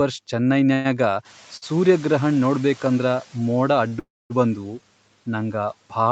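From 0.73 to 0.87 s the speech halts as the last sound is drawn out into a fading buzz for about 110 ms, then resumes where it stopped. This is a call audio freeze, likely from delayed packets draining the jitter buffer. When the room noise rises by about 12 dB near 1 s, the noise suppressor is catching up from 1.24 to 3.29 s: the noise passes with less reduction at first, then sinks by about 7 dB over roughly 2 s as the estimate adapts. Short stalls from a late packet at 1.57 to 1.64 s and 3.88 to 3.93 s hold a sound too long, by 53 and 35 ms, with a slight buzz or dip. From 3.99 to 4.32 s a second freeze stretches the last sound into a buzz that fades to silence for about 240 ms before the speech continues intact.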